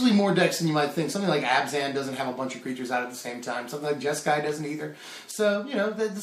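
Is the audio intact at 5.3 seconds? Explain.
No. A sudden gain jump occurs at 5.31 s and lasts to the end of the clip at 6.23 s. The level drops by about 7 dB from one sample to the next, with no fade between the two levels. The sound and its background noise fall together, so the whole signal steps down at once. The likely cause is a digital gain setting or bit shift applied instantly instead of being ramped in.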